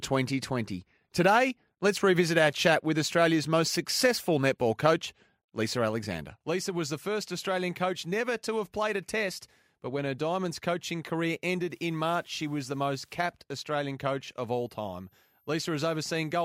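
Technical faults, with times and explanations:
11.70–13.20 s, low bit depth with dither: after "coaching career" the audio drops to 10 bits. Dithered rounding turns the error into steady hiss, roughly 40 dB below the speech.
14.52–16.44 s, switching supply whistle: after "coach of" a faint whistle appears, drifting between 12.85 and 13.02 kHz, roughly 45 dB down. A power supply is cycling audibly.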